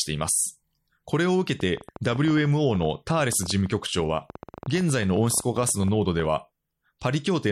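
A train of clicks runs through this speech clip from 1.60 to 6.26 s: around fifty similar pulses at an uneven pace averaging 10.3 per second, peaking a few decibels above the speech and audible in pauses too, likely from electrical interference or a faulty connection or power supply.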